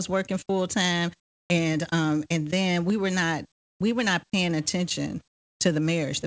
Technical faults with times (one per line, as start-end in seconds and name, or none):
1.20-1.50 comfort noise in place of the background
3.52-3.80 comfort noise in place of the background
5.28-5.60 comfort noise in place of the background